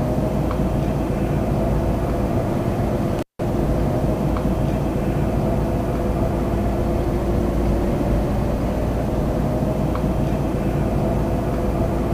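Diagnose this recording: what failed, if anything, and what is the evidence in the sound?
A loose connection in the analogue wiring, an intermittent contact, broke the signal path between 3.19 and 3.43 s. For roughly 170 ms the sound drops out, crackling as the contact breaks and remakes, with faint hiss while the line hangs open.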